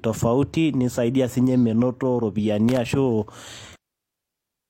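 From 2.69 to 2.77 s a loose connector crackle breaks into the speech: a worn contact rapidly makes and breaks, chopping the signal into a short, irregular burst of scratchy crackle.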